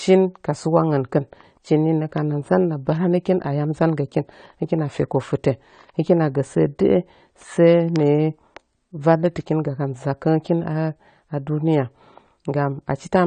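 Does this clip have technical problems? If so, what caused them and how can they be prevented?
Yes, audible AAC compression throughout: speech sounds dull and swirly, and a spectrogram shows nothing above 9 kHz with patchy gaps, likely from a low-bitrate AAC-LC encode around 32 kbps. Encoding at a higher bitrate, or keeping a lossless master, would prevent it.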